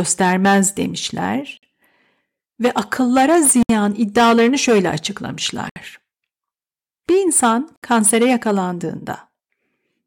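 Gaps at a join of encoded pieces break the speech every 2 s, at 1.57 s (53 ms), 3.63 s after "ve akıllara", 5.69 s and 7.76 s (each 67 ms). Separately encoded segments were spliced without trimming encoder delay and end padding, so each join opens a short silence before the speech resumes.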